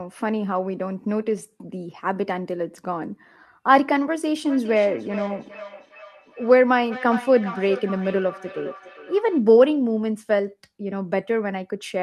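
Speech recording with feedback echo between two devices from 4.45 s to 9.45 s. The speech returns at a steady delay of roughly 0.4 s, with the loudest repeat about 13 dB below the direct voice. This points to a second device in the same room on the same call, playing back audio from another device's microphone. That microphone captures the playback again, and neither device's echo canceller removes it because it only cancels its own output.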